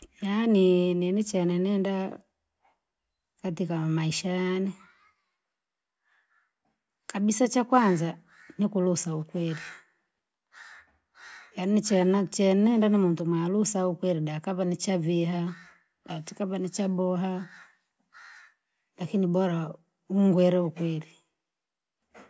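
No technical faults occur in this speech at any point, so there is nothing to describe in time order.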